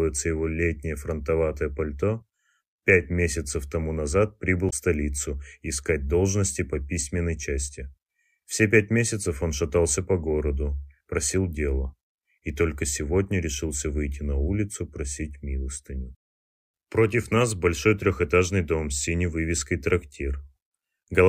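A short burst of damaged data in the compressed stream hits at 4.66 to 4.73 s: the decoder misreads corrupted frames and resyncs at the next header.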